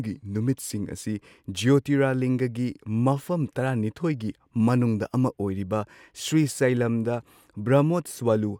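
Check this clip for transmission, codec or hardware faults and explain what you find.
No fault can be heard anywhere in this speech recording. There is nothing to report from the transmission, the codec or the hardware.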